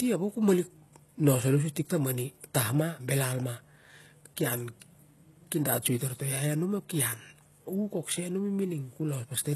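HE-AAC compression is heard throughout the speech, with nothing above about 12.3 kHz and heavy damage, which fits a very low bitrate near 16 kbps. The treble is likely rebuilt by copying lower bands upward, so s sounds turn gritty and metallic.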